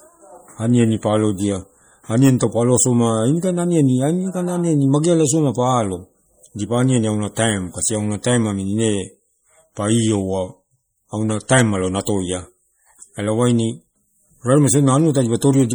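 From start to finish the speech carries plainly audible codec damage, most likely MP3 compression at a low bitrate, consistent with around 48 kbps. Starved of bits, the encoder cuts the treble and drops weak frequency lines, giving a watery, swirling texture, chirpy s sounds and smeared consonant attacks.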